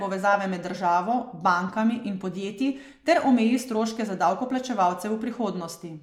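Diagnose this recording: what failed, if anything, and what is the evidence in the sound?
Nothing here points to a failure at any stage of the chain, and the speech comes across steady and unbroken the whole way.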